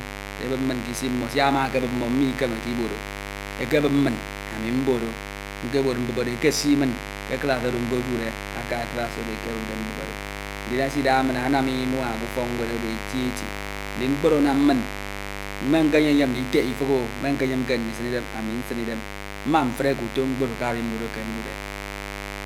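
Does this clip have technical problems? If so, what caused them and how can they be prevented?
Yes. Mains buzz runs through the whole clip. A dimmer, rectifier or unshielded cable let sharp switching spikes from the 50 Hz supply into the signal path. Those spikes arrive twice per cycle, 100 times a second, and their harmonics climb into the kilohertz range. The result is a steady, raspy buzz under the speech, sitting only about 10 dB below it. Keep dimmers and power supplies away from the audio chain, and use balanced, shielded cabling with a single clean ground.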